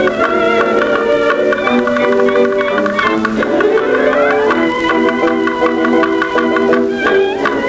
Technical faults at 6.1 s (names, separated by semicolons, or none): gain pumping